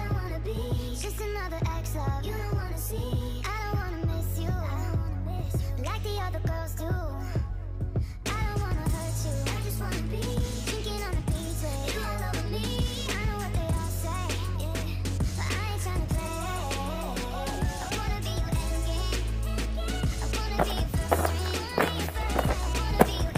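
No dropouts, clicks, distortion or timing errors are audible anywhere in the recording.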